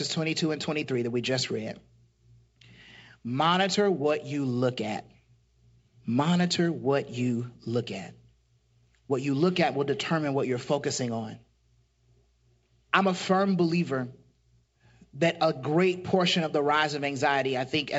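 The speech comes through G.722 wideband telephone coding at 64 kbit/s with nothing amiss, its band reaching up to about 7 kHz as that coding allows.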